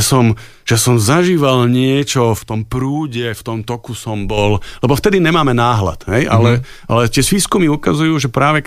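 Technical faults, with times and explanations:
2.38–4.37 s, sudden gain jump: the digital gain was likely changed with no ramp, cutting level by about 7 dB from one sample to the next after "že som zažíval niečo", so speech and background noise drop together, then snap back before "lebo vtedy nemáme".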